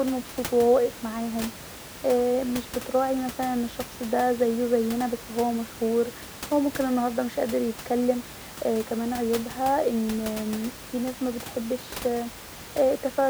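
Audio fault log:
No faults are heard in this speech clip. Room noise sits in the background at about 15 dB below the speech, as part of the recording.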